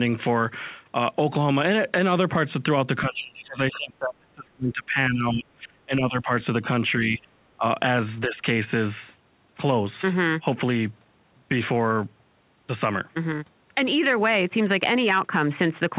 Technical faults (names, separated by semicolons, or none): speech suppressed in double talk; other side's voice leaking through